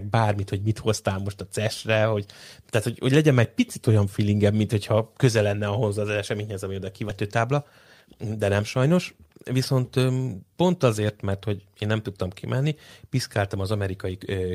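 At 7.09 to 7.11 s, about a second of speech never reached playback while later audio was already queued, so the stream skips ahead. Nothing fills the gap, and the two sides are joined almost directly, so the speech jumps abruptly forward.

From 7.23 to 11.32 s, the jitter buffer held more audio than its target and trimmed repeated short pitch-period pieces to catch up, cutting roughly 0.7 s in all. The speech runs at 115% speed at unchanged pitch and sounds hurried.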